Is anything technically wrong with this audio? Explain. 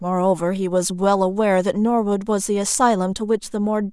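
No, nothing is technically wrong with this audio.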